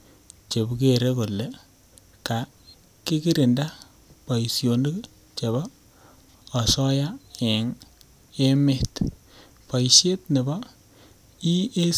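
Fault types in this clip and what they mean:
Nothing to flag here, as the speech comes across without any technical faults to describe.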